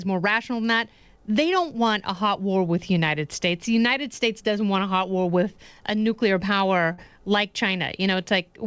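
Around 6.92 to 7.00 s there's a burst of packet loss. The receiver stretches the last bit of speech for about 57 ms, fading it out, then jumps ahead, skipping roughly 60 ms.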